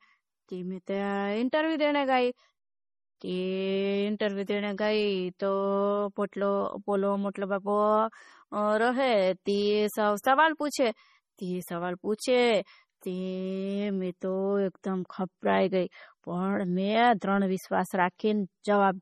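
MP3 compression runs throughout the speech, likely from heavy encoding at a low bitrate that fits about 32 kbps. Nothing remains above 15.1 kHz, and weak frequency lines flicker on and off between frames, giving a watery, swirly texture with metallic chirps on s sounds.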